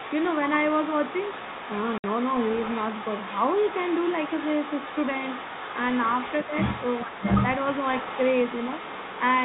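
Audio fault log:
Throughout: other side's voice leaking through. A second, quieter voice sits under the speech for the whole clip, around 10 dB down. That's most likely the far end playing on the talker's loudspeaker and getting back into the mic past an echo canceller that didn't fully remove it.
1.98 to 2.04 s: packet loss filled with silence. There's a 60 ms hole with hard edges. That fits two 30 ms packets going missing, with the receiver just dropping in dead silence instead of concealing the gap.
6.47 to 6.52 s and 7.05 to 7.18 s: speech suppressed in double talk. The talker's level dips by about 5 dB, briefly at first and then for about 150 ms. Both sides talking at once likely confused the echo canceller into ducking the near voice along with the echo.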